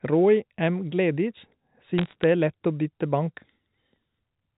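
Speech carried over a G.711 mu-law telephone path, cut off above 4 kHz, has a burst of bit errors on a digital phone line from about 1.98 to 2.24 s. In that quarter-second, sharp isolated ticks and a crackle sit over the unchanged speech. Each flipped bit corrupts a single 8-bit logarithmic sample, and flips in the upper bits, or in the sign of a loud sample, throw that sample far off, producing a click. The density suggests an error rate of a few bits per thousand, confined to that short stretch.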